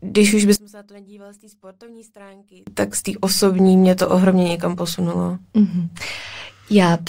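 One channel inverted, 0.56 to 2.67 s: the speech falls by about 29 dB to a faint residue. One stereo channel likely has reversed polarity, so the centred voice, common to both sides, cancels when the channels are summed to mono.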